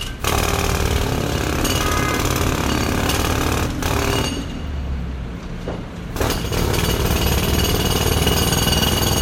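Throughout the audio, nothing rises above 16.5 kHz, which a spectrogram would show as a sharp, flat ceiling with an empty band above. Two different kinds of swirly, smeared artefacts are heard together, likely from transcoding between lossy codecs, consistent with a low-bitrate MP3 re-encoded as WMA.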